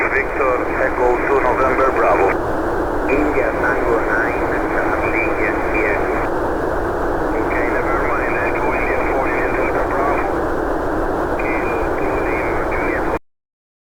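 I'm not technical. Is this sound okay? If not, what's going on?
No, it isn't quite right. There's a cut-off end: at about 13.17 s the sound just stops dead, partway through, instead of fading or finishing naturally. What's left of the clip after that, roughly the last three-quarters of a second, is complete digital silence. That usually means the final chunks of audio never got saved or played out, so the recording was chopped off before it was really done.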